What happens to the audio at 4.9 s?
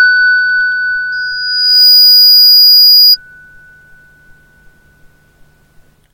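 Nothing goes wrong at 4.9 s: the sound carries straight through that moment with no dropout, click, distortion or other fault.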